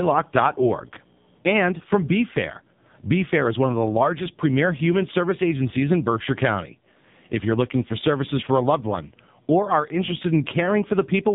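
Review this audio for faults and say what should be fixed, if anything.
The whole speech clip has gone through an AMR narrowband mobile codec. Nothing gets past 3.8 kHz, so it sounds dull and phone-like, and the heavy buzzy, synthetic texture points to one of the low modes around 5.9 kbps, where a few pulses per subframe rebuild the voice. To prevent it, capture or route the call over a wideband path, or at least a higher AMR mode.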